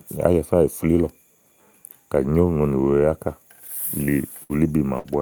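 At 4.04 to 4.10 s, a short stall from a late packet stretches the last sound by about 28 ms. It appears as a smeared, flat spectral stretch, and nothing is lost. Bursts of packet loss follow at 4.43 to 4.52 s and 4.99 to 5.07 s. Each time, about 60 ms goes missing and is concealed by continuing the last sound and fading it down, which shows on the waveform as a decaying envelope before the sound resumes abruptly.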